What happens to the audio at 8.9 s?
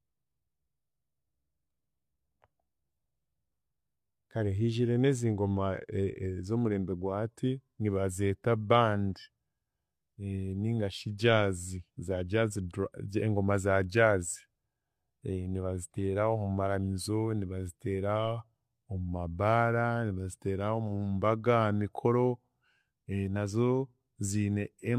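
Nothing goes wrong at 8.9 s: the speech carries on without any dropout, click, distortion or other break at that point.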